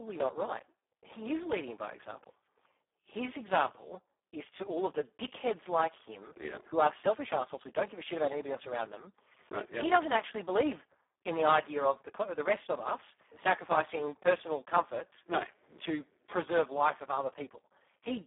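From start to finish the speech passes through the Speex codec at a low bitrate of about 4 kbps, so the excitation is starved of bits. The voice sounds hoarse, noisy and robotic, confined to a 300 Hz to 3.5 kHz line band with nothing above 3.8 kHz.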